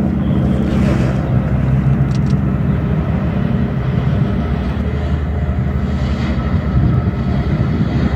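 From 0.71 s to 4.81 s the audio is doubled: a second full-band copy runs about 150 ms behind at roughly equal level, with no decay or room colour, starting and stopping abruptly. This doubled audio track likely comes from a slower second capture path or misaligned edit.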